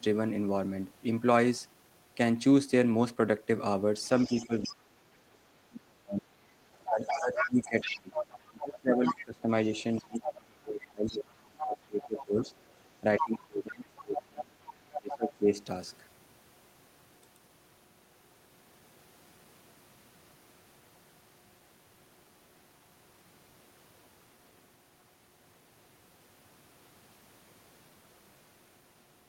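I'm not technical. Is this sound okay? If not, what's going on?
No. The other side's voice leaking through can be heard at 4.04–4.72, 6.73–12.64, 13.18–13.23 and 13.96–15.3 s, likely from loudspeaker echo the canceller left in the microphone.

From 4.29 to 15.52 s there is speech suppressed in double talk: for about seven seconds in total, the talker drops sharply in level, at times almost to silence, likely while both sides speak.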